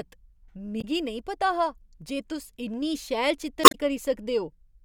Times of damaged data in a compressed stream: 0.78-0.84, 3.61-3.75

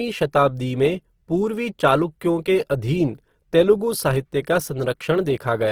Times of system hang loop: none

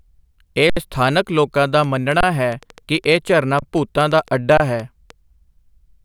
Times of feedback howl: none

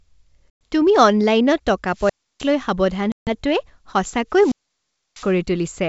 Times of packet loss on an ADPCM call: 0.50-0.73, 3.12-3.30

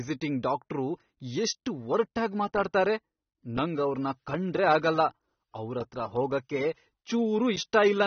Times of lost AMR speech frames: none

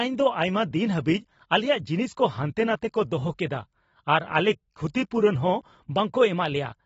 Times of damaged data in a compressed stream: none

